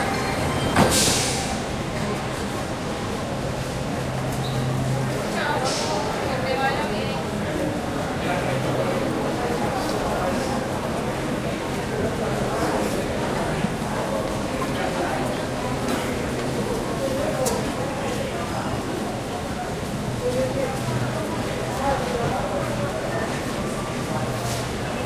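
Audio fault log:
No faults detected on the recording of sounds.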